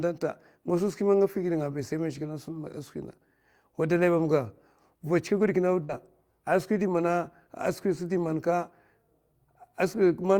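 A burst of packet loss at 5.83 to 5.92 s: consecutive packets never arrived, so the last sound is stretched and faded over 55 ms before speech resumes further on.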